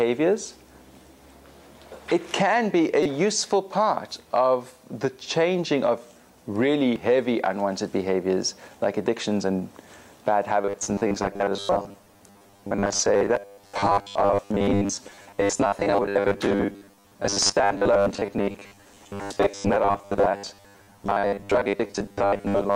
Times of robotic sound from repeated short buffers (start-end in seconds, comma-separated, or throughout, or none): 10.61-22.75